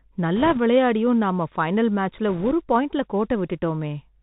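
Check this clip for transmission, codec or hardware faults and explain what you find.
Two faults are audible in this speech clip: Bluetooth CVSD headset codec damage throughout, and two short bursts of bit errors on the Bluetooth voice link.

The Bluetooth CVSD headset codec is plainly audible from start to finish. The speech sounds boxed-in and narrow, s sounds come through scratchy, and a fine granular hiss sits underneath. CVSD sends one up-or-down bit per sample, which fits a 64 kbps link. Its adaptive step lags behind loud, bright sounds, and it passes nothing above 4 kHz.

The bit errors on a Bluetooth voice link appear from 0.36 to 0.59 s, just before "விளாண்டும் நம்ம பைனல்", and again from 2.29 to 2.51 s, just after it. Each burst adds a rushing crackle with no sharp clicks. The first burst is slightly rougher, fitting an error rate around 2 percent against a little less in the second. 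Flipped CVSD bits each carry the same small weight and fade out quickly.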